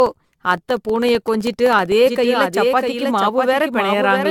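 Throughout, the speech sounds swirly, hollow and smeared, with blurred attacks and nothing above 17 kHz. That is generation loss, likely from repeated lossy re-encoding, consistent with several passes through AAC-LC at around 96 kbit/s. From 0.06 to 1.92 s, regular ticks sound every 64 ms, around thirty in all. These are periodic USB or driver dropouts, each losing roughly a millisecond of audio to silence. From 2.06 s to the end, an abruptly starting doubled audio track appears: a dry, full-band copy about 5 dB quieter trails roughly 0.7 s behind, likely from a second, slower capture path.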